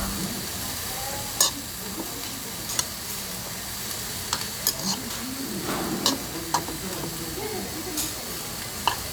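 No technical faults occur at any point in the audio, so there is nothing to describe in time order.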